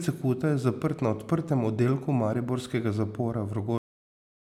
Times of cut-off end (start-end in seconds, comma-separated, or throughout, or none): 3.78-4.40